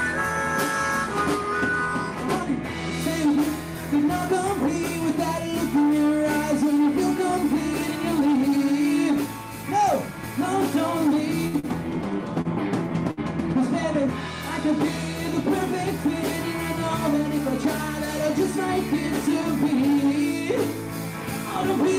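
Bursts of packet loss occur at 11.47 to 11.56 s and again at 13.11 to 13.20 s. In each, a run of packets never arrived in time, so the receiver filled about 59 ms by extending the last sound it had and letting it fade. When playback picks up, it has jumped ahead, skipping roughly 60 ms of the original audio, which gives each spot a smeared, decaying tail followed by an abrupt continuation. Short stalls from late packets follow at 11.59 to 11.66 s and at 12.41 to 12.48 s. Here a packet turned up after its playout time, the jitter buffer emptied, and the receiver held the current sound for about 41 ms and then 36 ms until the data arrived. Playback then resumes from the same point, so nothing is lost, but the sound briefly hangs with a slight buzz or dip, and the delay grows by that amount.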